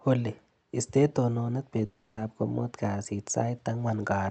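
From 1.85 to 2.19 s, speech becomes a fading buzzy smear, likely a long network dropout: 0.32 s vanishes, far longer than a brief glitch.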